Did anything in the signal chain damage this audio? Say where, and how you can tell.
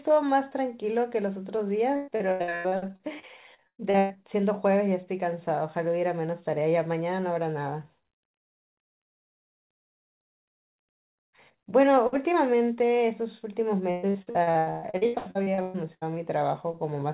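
Yes: repeated packet loss (robotic sound) from the network, 1.96 to 4.17 s and 13.91 to 16.12 s. Recurring gaps of up to 120 ms, patched by stretching the previous sound, give a choppy sound rather than a single clean dropout.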